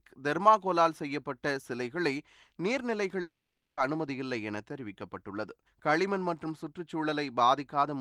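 A stall in the network stream, likely a long dropout in packet delivery, left the receiver with nothing to play from 3.21 to 3.79 s. It tried to cover the gap by stretching the last received sound into a brief buzzy tail that quickly fades, and the remaining 0.47 s or so falls to silence. When the speech resumes at 3.79 s, it picks up further along, with roughly 0.56 s of the original audio simply gone.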